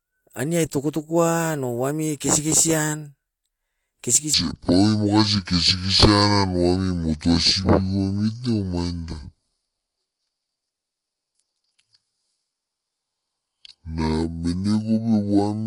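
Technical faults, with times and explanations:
4.34 to 15.67 s: section at the wrong speed. From here to the end, the speech runs at 0.59 times its recorded rate. Pitch falls with tempo, by about ten semitones. The speech turns deep and dragging. The likely cause is playback against a mismatched clock.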